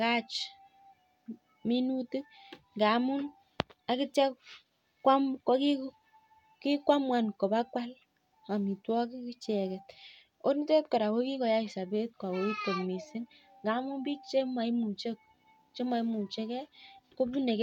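Listening to the speech recording, nothing stood out as a technical problem at any point.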